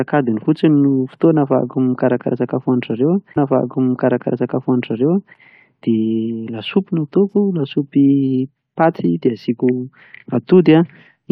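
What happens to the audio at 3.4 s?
At 3.36 s the player queues the same stream segment a second time, a stream segment repeated fault, so the speech jumps back with a small blip and replays about 2.0 s of material until 5.36 s before carrying on.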